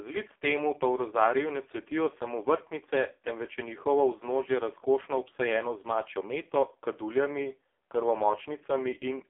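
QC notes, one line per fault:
Throughout: AMR narrowband mobile codec. The speech is confined to a telephone band of roughly 300 Hz to 3.5 kHz, with nothing above 3.7 kHz, so sibilants lose their edge and the low body is thin. Codec damage is heavy. Each 20 ms frame rebuilds the voice from a vocal-tract model excited by only a few pulses, which gives a buzzy, synthetic quality. That fits the lowest AMR-NB modes, around 5.15 kbps.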